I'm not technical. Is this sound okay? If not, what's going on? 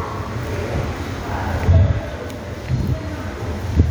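Yes, nothing about this sound stood out as a problem when I listened to it.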